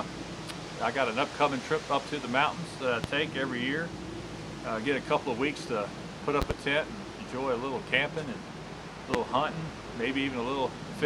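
Four loud pops cut through the sound. The first, at 3.04 to 3.07 s, is a single sharp pop about 20 dB above the surrounding level. At 6.42 to 6.53 s, two pops arrive in quick succession at a similar height. At 9.14 to 9.17 s, a single pop peaks higher, about 25 dB above. Each is most likely a voltage spike entering the chain, and the sound continues unbroken beneath every pop.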